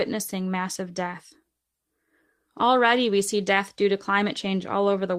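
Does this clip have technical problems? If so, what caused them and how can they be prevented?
No, there's nothing technically wrong to hear in this speech clip, so there's nothing here that needs fixing or preventing.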